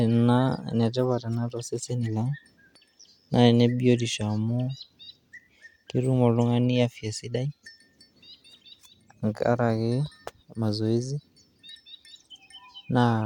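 Listening to the speech in this clip, nothing stood out as technically wrong at any point.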